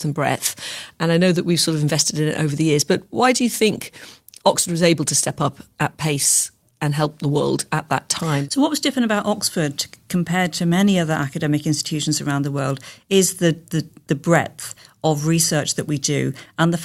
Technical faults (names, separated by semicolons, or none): call bitrate drop